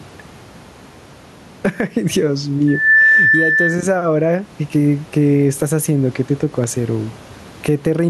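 From the start, gain pumping runs through the whole clip. The room noise sits about 35 dB below the speech. The swing is around 10 dB. The likely cause is gain set far too high, with a fast limiter clamping down.

From 2.67 to 3.86 s, a loudspeaker feedback squeal cuts in. A single 1.8 kHz tone builds up over about a third of a second. It peaks roughly 10 dB above the speech. The microphone is hearing its own loudspeaker, and the loop runs away at that frequency.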